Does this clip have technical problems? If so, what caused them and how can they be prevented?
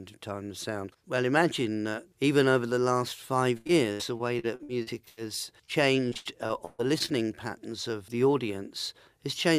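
Yes. From 3.57 to 5.19 s, repeated packet loss gives a choppy, robotic sound. Ten gaps were patched by extending the last sound, covering about 28% of that stretch. The longest gap lasts 83 ms. From 6.10 to 7.10 s it happens again, with seven gaps, about 30% concealed, and one gap of 136 ms. A steadier network path and a larger jitter buffer would prevent this.

From 5.65 to 5.70 s, a short concealed packet loss causes a brief smear. About 20 ms of audio never arrived, and the decoder filled the hole with a continuation before blending back. Forward error correction or redundant packets would cover such isolated losses.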